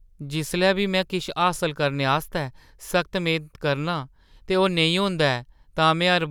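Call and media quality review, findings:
No audible faults found.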